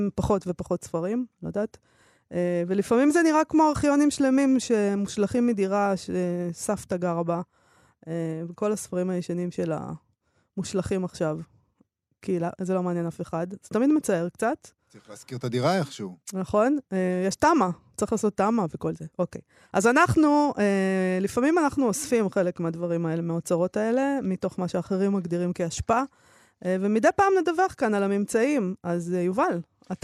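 Nothing faulty is audible anywhere in this speech recording.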